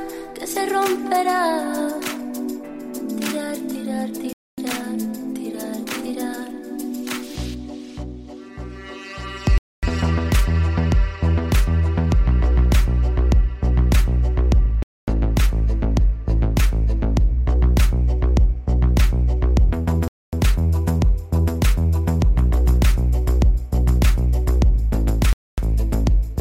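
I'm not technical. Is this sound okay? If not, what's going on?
No. The sound drops out briefly five times, at 4.33, 9.58, 14.83, 20.08 and 25.33 seconds. Each hole lasts a quarter of a second and ends abruptly. This is a gap between chunks. The audio arrives in five-second pieces, and silence is inserted at each join.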